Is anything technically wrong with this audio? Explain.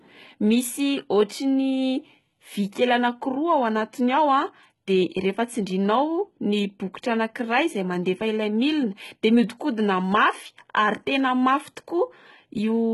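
Yes. Throughout the speech, the treble sounds synthetic, and HE-AAC compression is the likely cause. The upper band is rebuilt by copying lower bands upward, so s sounds turn gritty and metallic, with nothing above 11.8 kHz. The heavy damage suggests a very low bitrate, around 16 kbps. A plain low-pass would sound dull, but here the treble stays bright and just sounds wrong.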